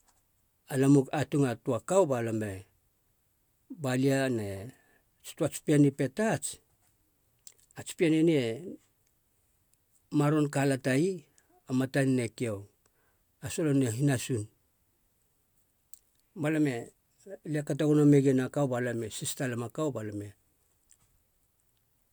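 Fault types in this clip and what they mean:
No faults identified in this speech recording on listening.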